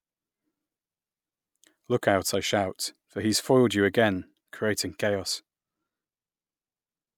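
Nothing goes wrong anywhere in this speech recording, so there's no technical fault to point to.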